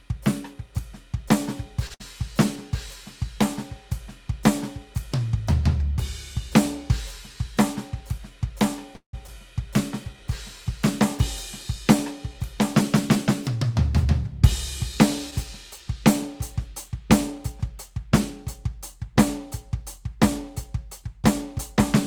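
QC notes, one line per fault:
1.87 to 1.92 s, short stall from a late packet: The music catches and hangs for a moment, one sound held about 25 ms too long with a faint buzz or dip, then carries on from exactly where it paused. Nothing is lost. A packet missed its playout time, the jitter buffer emptied, and the receiver stretched the last bit of audio until the packet turned up. That added about 25 ms of delay.
1.94 to 2.02 s, burst of packet loss: Right after that stall, the music briefly turns into a held, fading copy of itself for about 58 ms. It then resumes slightly further along, with about 60 ms of the performance gone. A short run of packets never arrived in time to play. The receiver extended and faded the last sound over the hole, then jumped to the next audio that did arrive, so that stretch is simply missing.
8.95 to 9.15 s, call audio freeze: The music stops moving for about 178 ms. 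It first smears into a held, fading tone and then drops to roughly 100 ms of silence before the music picks up again at the point where it froze. Nothing is cut, but a pause has been inserted. The likely cause is packets stalled in transit, draining the jitter buffer, with the receiver filling the wait with concealment that faded out.
9.27 to 9.30 s, skip ahead: Just after the freeze, the music lurches forward. A short piece of roughly 70 ms vanishes, and the two sides are butted together with only about 6 ms of smoothing at the seam. A stretch of audio was dropped while later audio was already waiting, so the receiver jumped ahead to catch up. This recovers roughly 70 ms of delay.
9.66 to 12.57 s, jitter buffer slow-down: Over nearly three seconds the music drags slightly, playing at about 98% speed with the pitch unchanged. Held sounds feel a touch stretched and the rhythm loosens. With its reserve running low, the jitter buffer built up slack by repeating single pitch periods many times over. 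That added about 72 ms in total, which comes out as a slower tempo rather than a drop in key.
13.49 to 14.06 s, jitter buffer speed-up: For just over half a second the music hurries, running at about 106% speed at the same pitch, so the beat briefly pushes ahead of its steady tempo. The buffer was now holding more audio than it wanted. To bring latency back down, the receiver trimmed tiny pitch-period-sized pieces in quick succession, shaving roughly 50 ms overall. That is why the passage sounds rushed rather than higher.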